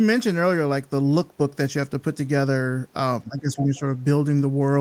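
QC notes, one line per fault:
3.22–3.85 s, speech suppressed in double talk: the speech level sinks by roughly 15 dB at its deepest, with about half a second of the span audibly held down or chopped. The likely cause is an echo canceller meeting simultaneous far-end activity: unable to tell the near talker apart from loudspeaker echo, it attenuated everything it picked up, so the talker's own signal was ducked along with the echo.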